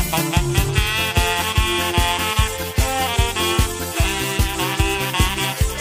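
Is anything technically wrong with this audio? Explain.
No, nothing technical stands out here; the audio sounds fine all the way through, with nothing getting in the way of listening.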